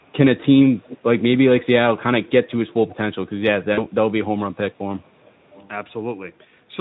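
A faint delayed copy of the speech appears from 0.83 to 0.98 s, trailing the original by about 464 ms and sitting about 20 dB below it. This is likely an echo leak from a far-end loudspeaker that the echo canceller did not fully suppress. On a spectrogram it shows as a weak repeat of the preceding harmonic pattern, shifted right by roughly half a second. From 3.73 to 3.87 s, VoIP packet loss concealed by the speech codec covers a 40 ms gap, consistent with two lost 20 ms frames. The Speex decoder extrapolates the last pitch and spectral envelope into a buzzy tone or coloured noise that fades. The waveform shows a smooth, decaying, over-regular stretch, and the spectrogram shows blurred, steady harmonics instead of normal formant movement, with weak or distorted audio continuing briefly after packets resume.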